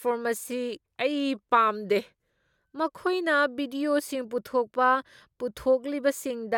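From 0.51 s to 2.56 s the speech slows by about 5.6% and drops a full semitone, then snaps back just before "ꯃꯈꯣꯏꯅ ꯚꯤꯗꯤꯑꯣꯁꯤꯡ ꯄꯨꯊꯣꯛꯄ", likely a drift correction step. Unlike wow's gradual wobble, the shift is abrupt and holds steady.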